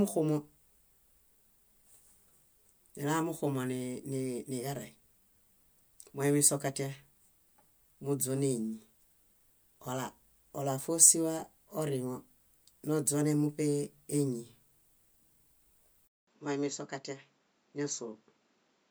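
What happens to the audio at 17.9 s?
At 17.9 s the recording is already on what is likely an input switched to a poorer device, a change of capture source that took effect at 16.07 s and lasts to the end. The new input carries nothing above 7.6 kHz, so the speech sounds duller and boxier. The switch opens with a 200 ms silence, the level drops by roughly 5 dB, and a different background noise sits around 40 dB below the speech.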